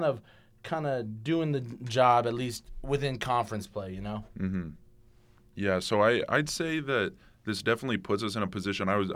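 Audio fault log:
No fault is heard in this speech.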